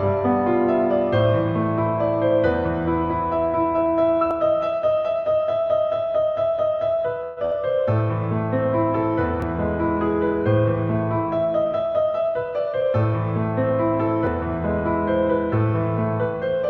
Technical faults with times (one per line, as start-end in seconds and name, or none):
4.31 audio missing between chunks
7.23-7.39 call audio freeze
7.45-7.53 burst of packet loss
9.42 audio missing between chunks
11.65-13.12 jitter buffer speed-up
14.27 audio missing between chunks